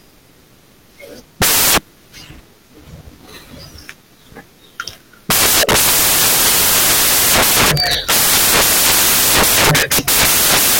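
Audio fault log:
throughout: samples built from the wrong bytes. Each sample's bytes are being assembled wrongly, whether misaligned by a byte or in swapped order, so the rapidly changing low-order bits land in the high positions. The speech turns into loud, harsh broadband noise, close to white on the louder sounds.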